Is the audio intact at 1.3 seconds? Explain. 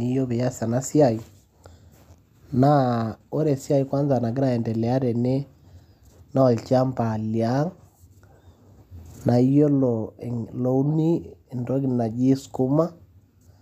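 Yes, the speech at 1.3 seconds plays through cleanly, with no dropout, glitch or distortion at that point.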